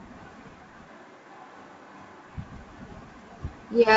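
From 0.91 s to 2.26 s the speech abruptly turns roomy and hollow, with thinner low end, and then snaps back just as suddenly. This is likely a switch to a distant microphone, with the close capsule's feed lost. Level barely changes, but room noise sits roughly 25 dB under the speech. On a spectrogram the band shows a weaker bass floor, smeared reverberant tails between syllables and a raised noise bed, still cut off above 7.8 kHz by the G.722 coding.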